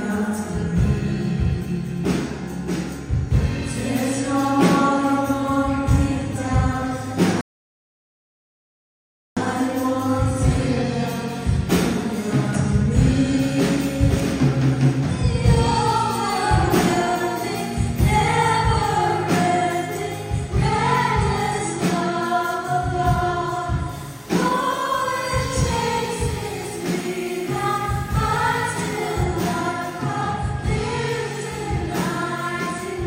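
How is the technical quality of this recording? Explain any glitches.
The recording has two clear faults: a playback stall and a stretch of coarse, grainy distortion.

From 7.41 to 9.37 s there is a rebuffering stall. The player ran out of downloaded audio and waited about 1.96 s for more data. The sound drops to silence and then picks up exactly where it stopped. A packet dropout would lose audio and jump forward, but here nothing is skipped, so the gap only adds time.

From 23.93 to 29.23 s the sound turns gritty and sandpapery, with a noise floor only about 25 dB below the signal. The likely cause is low bit depth without dither. Levels rounded to very few steps, roughly 7 bits' worth, produce an error that follows the signal. That is the difference from ordinary added hiss, which stays steady.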